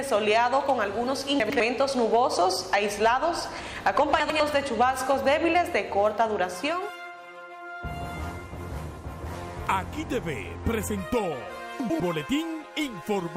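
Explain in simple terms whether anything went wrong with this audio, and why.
Chunks out of order at 1.4–1.6, 4.2–4.4 and 11.8–12.0 seconds: each time, one 100-millisecond slice of audio arrived a slice late and played after the one meant to follow it. Nothing is missing, but the swap sounds jumbled.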